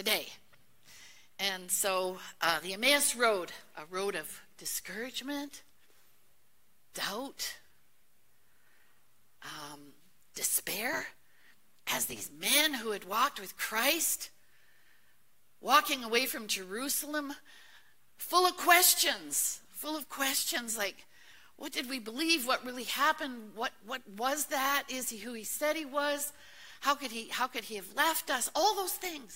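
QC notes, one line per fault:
10.93–12.31 s, block size mismatch (truncated): a 100 Hz buzz with the sound hurried about 1.16 times but with its timbre kept, because each block's tail is discarded, which fits 512-sample blocks being written.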